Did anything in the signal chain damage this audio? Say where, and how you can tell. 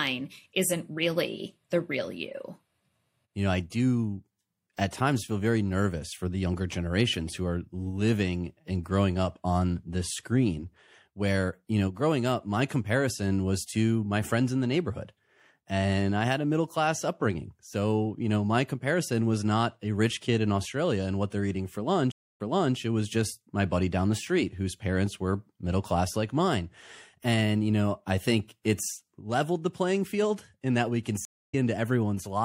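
Yes. Throughout, the treble is cut off and there's a watery, swirly quality with smeared consonant attacks, which is likely MP3 compression at a fairly starved rate, something like 64 kbps. Weak frequency lines are flickering on and off between frames.

There are two stream reconnects at the network stage. After "what they're eating for" it goes silent for about 280 ms at 22.12 to 22.76 s, then resumes 0.37 s earlier, repeating a bit. After "in that we can" (31.25 to 31.55 s) there's another 280 ms gap, and it comes back slightly ahead.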